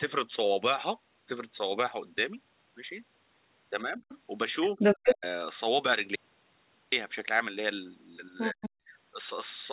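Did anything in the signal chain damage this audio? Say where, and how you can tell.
Yes. The call's echo canceller is the likely culprit for speech suppressed in double talk. When both ends talked at once, it could not tell the near talker from loudspeaker echo and attenuated everything. The level dips by about 15 dB between 3.81 and 4.04 s, then collapses by about 40 dB from 4.70 to 5.24 s and from 8.53 to 8.92 s. The talker's speech thins out or breaks into pieces during each overlap.

The same echo-cancellation stage likely also lets the other side's voice leak through. Residual loudspeaker pickup survives on the microphone path. A faint scrap sits about 20 dB under the talker at 4.09 to 4.18 s. From 4.63 to 5.15 s the leaked voice is about 5 dB louder than the talker, overlapping the deepest suppression. Another stretch about 5 dB below appears at 8.38 to 8.70 s, again just as suppression kicks in.

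An audio dropout to silence runs from 6.16 to 6.92 s, roughly 770 ms. The input was likely lost upstream of the encoder, through a device or link failure, while silence kept being written. The sound stops abruptly and resumes mid-flow, and the gap holds digital silence with no room tone. Whatever occurred in that span is gone. Nothing reaches above 4 kHz anywhere, which fits a narrowband G.711 call codec.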